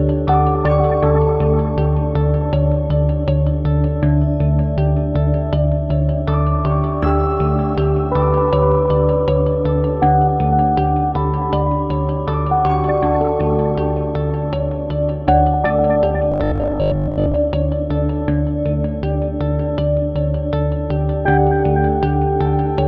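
From 16.32 to 17.38 s the sound turns into robotic sound from repeated short buffers, a hard, metallic buzz pinned at 50 Hz that loosely tracks the audio. Likely cause: audio arriving too slowly, so roughly 20 ms chunks get replayed for most of that stretch.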